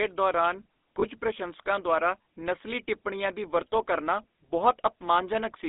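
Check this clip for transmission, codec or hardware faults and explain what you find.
Two faults are present: GSM full-rate coding across the whole speech clip, and a brief lost-frame concealment event.

GSM full-rate codec, throughout: the codec models the vocal tract and excites it with sparse, regularly spaced pulses. The line band runs only from 250 Hz to 3.7 kHz, and a plainly audible buzzy, gravelly roughness sits on the voice, consistent with 13 kbps full-rate coding.

Lost GSM frames, 1.00 to 1.05 s: the decoder covered a bad frame by repeating the last good frame's parameters. The result is a short, rough metallic ring in place of the missing sound, which fits a single lost 20 ms frame.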